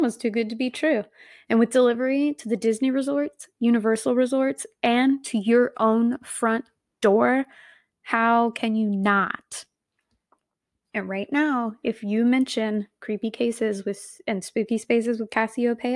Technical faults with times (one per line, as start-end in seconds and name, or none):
none